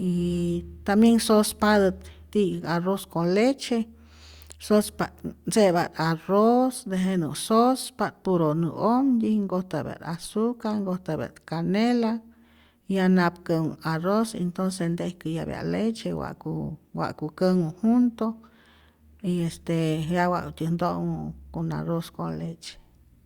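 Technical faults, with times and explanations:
No technical faults are audible anywhere in this speech recording.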